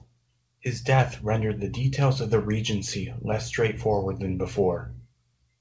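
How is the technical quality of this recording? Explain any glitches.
No glitches or faults can be heard in this speech.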